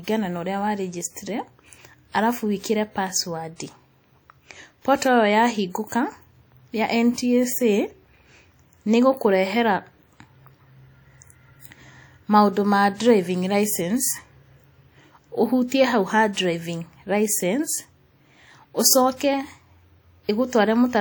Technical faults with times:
0.00-21.00 WMA compression

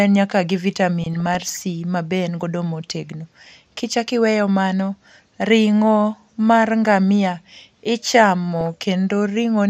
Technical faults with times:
0.00-9.69 MP2 compression
1.02-1.61 DAB burbling
8.61-8.66 DAB burbling

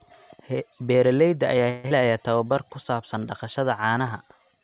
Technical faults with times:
1.70-1.93 long network dropout
2.37-3.81 jitter buffer slow-down

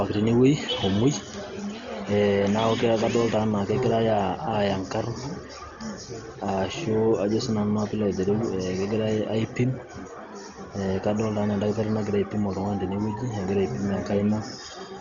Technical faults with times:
0.00-15.00 Dolby Digital compression

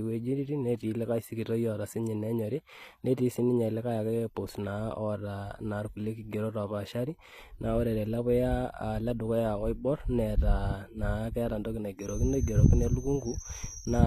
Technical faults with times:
0.00-14.06 HE-AAC compression
11.96-14.06 feedback whistle

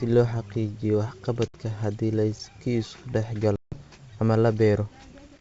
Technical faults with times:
1.48-1.55 packet loss on an ADPCM call
3.56-3.81 packet loss on an ADPCM call

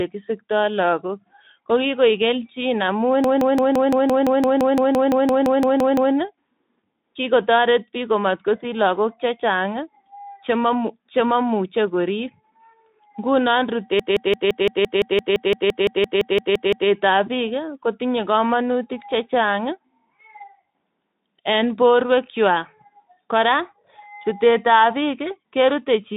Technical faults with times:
3.24-6.14 system hang loop
13.99-16.90 system hang loop

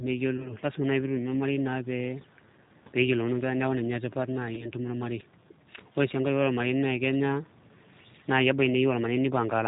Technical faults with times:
0.00-9.67 G.729 codec
0.37-0.55 VoIP packet loss concealed by the speech codec
4.55-4.66 VoIP packet loss concealed by the speech codec

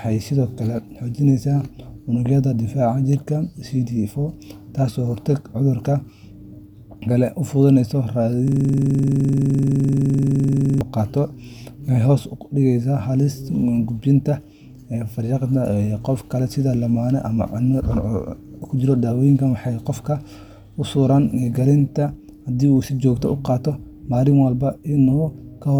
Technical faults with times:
8.48-10.81 system hang loop

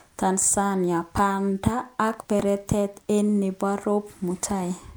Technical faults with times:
2.13-2.43 processor overload crackle

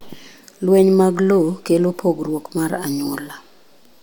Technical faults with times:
none

